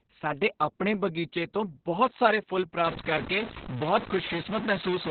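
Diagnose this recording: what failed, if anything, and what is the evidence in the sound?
Muffled, hoarse, slightly robotic speech with nothing above 4.3 kHz points to the codec: heavy Opus voice compression in narrowband SILK mode, which fits about 6 kbps.

From 2.86 s to the end, after "ਤੋਂ ਬਹੁਤ ਸਾਰੇ ਫੁੱਲ", distortion sets in and pauses fill with noise, likely a stuck bit in the converter or its data lines.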